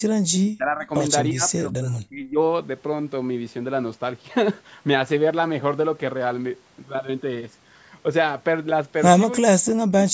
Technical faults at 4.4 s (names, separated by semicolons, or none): none